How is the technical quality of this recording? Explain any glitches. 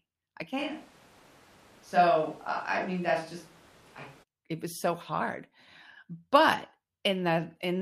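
The recording has one glitch. From 0.60 to 4.22 s there is a switch to a distant microphone. The close mic's feed likely dropped out, leaving a pickup farther away. The speech turns abruptly roomy and hollow, at roughly the same level, with room noise about 30 dB below it. It then snaps back just as suddenly.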